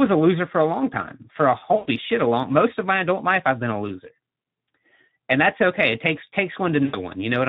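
The whole clip is speech with plainly audible Speex codec damage, with the hoarse, noisy CELP texture that fits roughly an 11 kbps setting. The coder has too few bits to rebuild the excitation cleanly, so the voice never sounds natural. On top of that, there's VoIP packet loss concealed by the speech codec in three spots. From 1.75 to 1.89 s, just before "shit a long most", the decoder stretches the last sound into a fading smear, which points to about 120 ms of lost audio. At 4.41 s, right after "I've been a loser", there's a brief 20 ms glitch. From 6.85 to 7.04 s, another stretched, decaying patch covers what sounds like about 80 ms of dropped packets.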